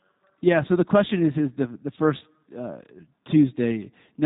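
Throughout, the speech sounds slightly rough and synthetic, with nothing above 3.8 kHz: G.729 codec damage, consistent with 8 kbit/s model-based coding that rebuilds each frame from a filter and pulses.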